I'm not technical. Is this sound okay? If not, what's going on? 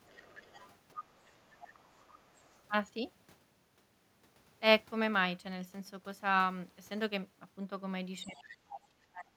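No. From 0.07 to 0.76 s, again from 0.94 to 2.6 s, and briefly at 8.27 to 8.56 s, you can hear a faint second voice underneath: the other side's voice leaking through. The talker's device was likely playing the far end on a speaker, and the echo cancelling didn't fully scrub it out.

From 8.24 s to the end, the talker's own voice drops away sharply, very nearly to silence at its worst, for about a second in total. That's speech suppressed in double talk: both people likely talked at once, and the echo canceller turned everything down together.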